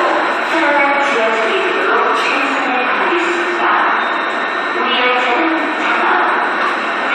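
No technical faults are audible anywhere in this audio.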